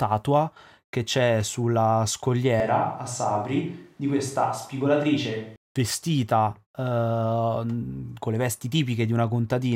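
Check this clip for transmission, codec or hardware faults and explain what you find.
One fault is present. From 2.60 to 5.56 s the speech turns suddenly roomy and hollow, with less bass and background noise about 35 dB below the speech, while the level stays about the same. This is likely a switch to a distant microphone, with the close one's signal missing for that stretch.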